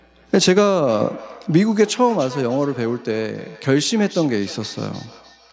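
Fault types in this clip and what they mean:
Feedback echo between two devices: From 0.86 s to the end, the speech is trailed by a thin, ringing copy that returns at a steady spacing of roughly a third of a second and peaks at about 20 dB below the direct speech. The cause is two devices in one room on the same call. One plays what the other's microphone sent, that microphone picks it up again, and neither echo canceller can remove sound its own device never played.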